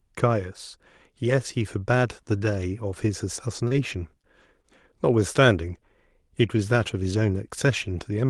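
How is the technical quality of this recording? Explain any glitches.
It's a decent call recording with a small cluster of packet-loss glitches packed between about 3.7 and 4.7 seconds. The top end stops around 12 kHz, which fits Opus running as a WebRTC call codec.

Short concealed packet loss hits three times: 3.67 to 3.74 s, 4.22 to 4.25 s and 4.61 to 4.66 s. In each spot a few tens of milliseconds of speech arrived too late, so the decoder kept the last sound going and blended back in. You hear brief smears or wobbles, and the first one runs a touch long.

The other two glitches are lost packets rebuilt from error correction, at 3.71 to 3.73 s (inside that first smear) and 4.41 to 4.43 s. Each 20 ms packet was rebuilt from the low-bitrate backup copy carried in the next packet, so there's no gap, just a moment that sounds rougher and noisier.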